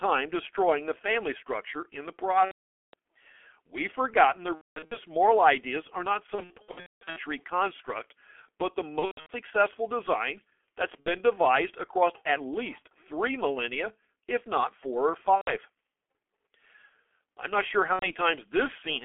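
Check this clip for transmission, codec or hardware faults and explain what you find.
Two faults are present: heavy G.723.1 codec damage throughout the speech, and seven bursts of VoIP packet loss concealed by the speech codec.

G.723.1 codec, throughout: the low-rate frame-based coder, consistent with about 6.3 kbit/s, restricts the speech to roughly 300 Hz to 3.4 kHz and updates its model slowly. The result is muffled and hoarse, with smeared consonants.

VoIP packet loss concealed by the speech codec, at 2.45–2.94 s, 4.55–4.98 s, 6.35–7.20 s, 8.99–9.32 s, 11.00–11.08 s (between "successful design that's" and "devised across at least"), 15.35–15.54 s (after "if not four or") and 17.93–18.14 s (after "I'm not sure"): the decoder extrapolates missing audio from its last pitch and filter while reducing gain. These gaps come out as buzzy or noisy fading stretches, and the speech stays weakened briefly after each one.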